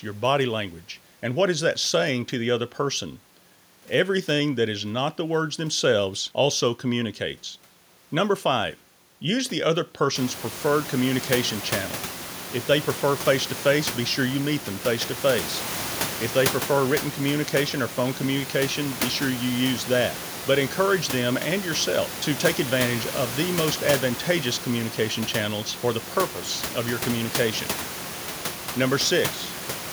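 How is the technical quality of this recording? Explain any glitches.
No glitches or technical faults can be heard here.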